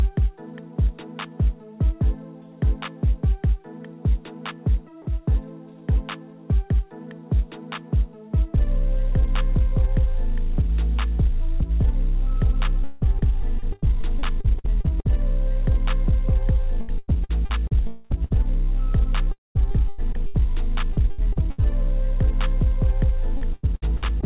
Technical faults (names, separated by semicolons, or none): repeated packet loss (robotic sound); long network dropout